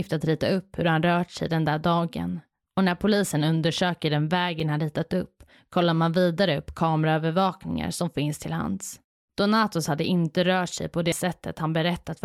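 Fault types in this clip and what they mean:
Block of digital silence: the output briefly drops to zero with no fade. Two gaps, after "hur han rört sig" and "när polisen undersöker den", sound as ticks.
Damaged data in a compressed stream: corrupted bytes make the decoder misread frames and lose sync, causing a brief disturbance at 11.12 s after "inte rört sig på".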